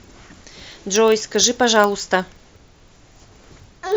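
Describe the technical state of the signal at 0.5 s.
At 0.5 s you're hearing a filter restarted on every block, which runs the whole clip: each 40 ms block starts from silence, leaving a 25 Hz buzz that tracks the speech level.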